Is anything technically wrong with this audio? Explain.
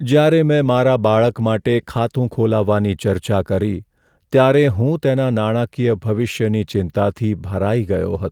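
No, nothing technically wrong can be heard in this speech recording. There are no audible faults anywhere in the clip.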